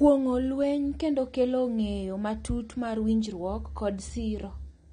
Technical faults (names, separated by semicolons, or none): AAC compression